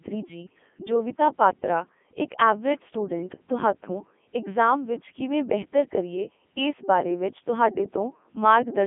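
Throughout, the speech is robotic and buzzy, the mark of the Codec 2 vocoder rebuilding it from sine waves instead of keeping the waveform. A plain telephone band stays natural though muffled. Here everything sounds synthetic, with nothing above about 3.6 kHz, from its 3.2 kbit/s mode.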